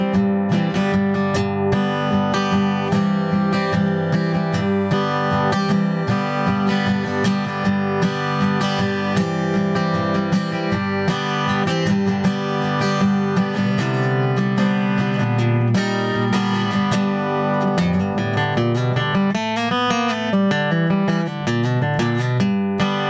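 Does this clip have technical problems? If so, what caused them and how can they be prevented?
Yes: gain pumping runs through the whole clip, with the gain swinging around 15 dB under loud sounds, likely from mic gain set too high into a fast limiter. Keep the input gain lower and ease off the limiter's attack and release so it isn't grabbing every peak.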